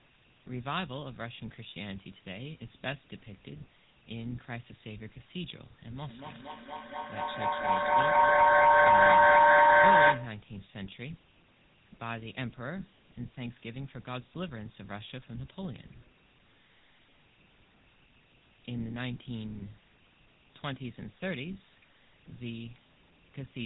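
Throughout, the GSM full-rate codec gives the speech a buzzy, gravelly roughness, consistent with 13 kbps coding. A spectrogram shows everything cut off at 3.9 kHz. From 5.9 to 10.51 s, a feedback howl builds as a microphone-loudspeaker loop gains level on each pass. Its loop repeats roughly every fifth of a second, and the howl peaks about 17 dB above the speech. It appears as a bright tone band near 1 kHz, with a swelling waveform envelope.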